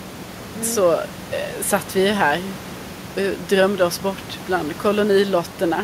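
No technical faults can be heard in this speech recording.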